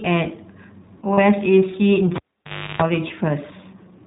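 Speech coded with the iLBC codec throughout, band-limited below 4 kHz with a plainly audible rough, synthetic edge that fits the 15.2 kbps mode with 20 ms frames. Lost iLBC frames at 1.14 to 1.20 s and 3.08 to 3.11 s are bridged by a brief buzzy held vowel, gaps of about 40 ms and 20 ms that suggest two frames and one frame. A cable pulled and plugged in between 2.16 and 2.82 s gives a pop, about 0.61 s of dropout including roughly 0.34 s of 50 Hz mains buzz, then a second pop.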